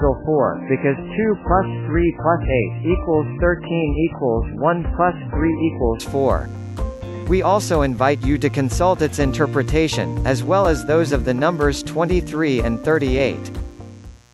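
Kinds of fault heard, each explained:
Mains buzz: a steady, raspy buzz sits roughly 35 dB below the sound throughout, from switching spikes, twice in every 60 Hz mains cycle, leaking into the signal and spreading into harmonics.
Adaptive stream starting at a low bitrate: until 6.0 s the sound is dull and smeared with nothing above 3 kHz, then it abruptly brightens, which fits a player stepping up from a very low-bitrate MP3 version.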